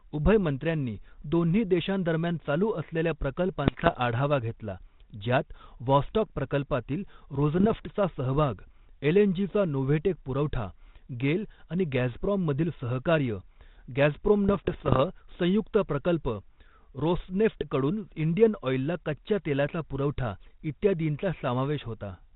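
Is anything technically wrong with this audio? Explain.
Yes. Three bursts of bit errors on an ADPCM link break up the speech, over a path that sounds like 32 kbit/s G.726 with nothing above 4 kHz: 3.64 to 3.95 s, after "चालू असलेल्या" and before "आढावा घेतला"; 7.57 to 7.80 s, after "व्हॉस्टॉक प्रकल्पातील"; and 14.49 to 15.00 s, before "संयुक्त प्रकल्प". The damage suggests an error rate of roughly 0.5 to 0.7 percent. Each corrupted bit throws off the decoder's step size and predictor, so the error rings on for several milliseconds as pops, rough bursts and brief jumps in level.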